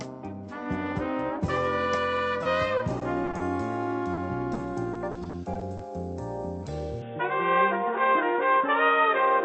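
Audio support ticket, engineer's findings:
Repeated packet loss (robotic sound), 2.43–3.41 s and 4.93–5.81 s. Choppy stretches. Jitter buffer/network: six gaps then seven, each up to 20 ms and 40 ms, patched by extending prior audio; 12% and 20% of each span synthetic. Spectrogram: smeared, repeated harmonic slices with blurred onsets; waveform shows periodic near-copies between real segments.

Short concealed packet loss, 4.13 s (40 ms) and 4.53 s (20 ms). Brief smear or wobble. Decoder concealment filled each hole from the preceding pitch or noise, then crossfaded back. Spectrogram: short over-smooth stretch extending the preceding sound.

Input switched to a poorer device, 7.02 s to end. Sound turns dull and boxy with no gap and no level jump. Likely a switch to a narrowband headset or microphone: nothing above 3.7 kHz, new noise floor about 45 dB below signal. Spectrogram: abrupt ceiling at 3.7 kHz versus the wider band before, with a fresh steady noise band; waveform envelope unchanged.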